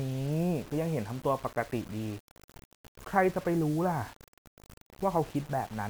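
Speech, and the whole thing has that grainy, crunchy edge of low bit depth without dither. The grit rides along with the voice rather than sitting underneath as a steady hiss, getting rougher as levels drop, and the quietest tails sputter or fall to nothing. That points to a likely cause of rounding down to around 6 bits with no dither, leaving the error roughly 20 dB under the signal and tied to it throughout.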